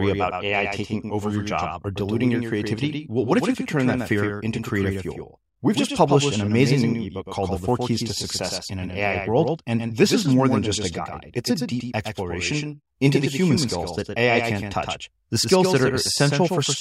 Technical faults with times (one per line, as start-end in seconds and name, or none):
0.00-16.80 doubled audio track